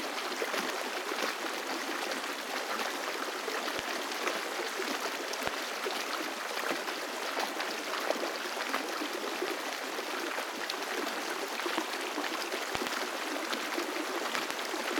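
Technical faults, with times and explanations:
3.79, 5.47, 9.48, 11.78, 12.75–12.89 and 14.35–14.53 s, loud pop: sharp pops standing roughly 20 to 25 dB above the sound (doubled in the last two), likely voltage pulses from a plug, switch or static.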